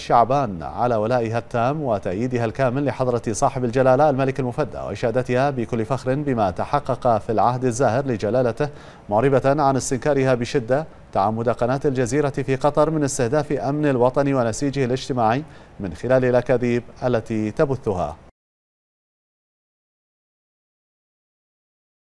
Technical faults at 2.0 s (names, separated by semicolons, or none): none